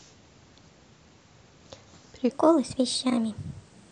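A speech recording in which the final stretch, from 2.30 s to 3.91 s, is a section at the wrong speed: it plays 1.2 times too fast, so the voice jumps up by about three semitones and hurries at the same instant. A clock mismatch during editing or playback is the likely cause. Unlike a pitch shift or time-stretch, pitch and tempo move together here, and the change is abrupt rather than a gradual drift.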